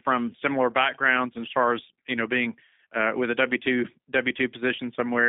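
Throughout, the G.729 codec is plainly audible. The speech sounds rough and synthetic, band-limited to about 200 Hz to 3.7 kHz, which fits an 8 kbit/s G.729A stream.

From 4.76 to 4.79 s, there is VoIP packet loss concealed by the speech codec. A 20 ms gap, likely one lost packet, is filled with a brief, fading extrapolation.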